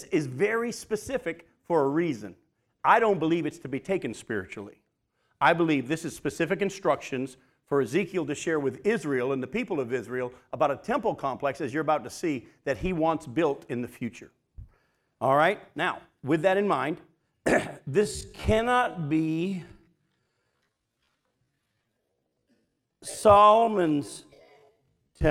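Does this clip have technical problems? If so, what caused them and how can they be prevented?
Yes. From 17.99 s to the end at 25.31 s, the speech abruptly slows to about 0.57 times its pace while pitch holds steady. This is likely a time-stretched section, padded by repeating short slices. Fit timing by editing content, not by stretching.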